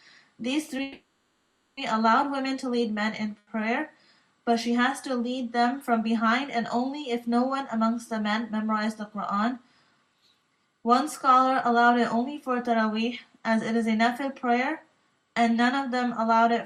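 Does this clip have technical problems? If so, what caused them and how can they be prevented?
Yes. From 0.82 to 1.79 s there is a call audio freeze: the last sound is stretched into a fading buzz or hiss for about 950 ms, then resumes where it stopped. The likely cause is packets held up in transit, leaving the jitter buffer empty. A spectrogram shows smeared, repeating harmonics, and the waveform shows a decaying, repetitive envelope. Prevention: prioritise voice traffic with QoS.

From 3.38 to 3.61 s, a short stall from a late packet holds one sound about 90 ms too long, with a slight buzz or dip. The packet arrived after its playout time, so the receiver extended the previous audio. This appears as a brief horizontal smear in the spectrogram. Prevention: allow a slightly deeper adaptive jitter buffer.

From 9.84 to 10.43 s, a jitter buffer speed-up runs the audio at about 113% speed with unchanged pitch. 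Delayed packets arrived together, and the receiver trimmed about a tenth of a second in pitch-period slices to cut the delay. The spectrogram shows compressed timing with no frequency shift. Prevention: smooth the network's delivery bursts.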